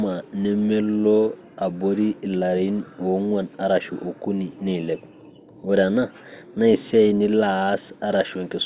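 No technical faults can be heard at any point in the speech.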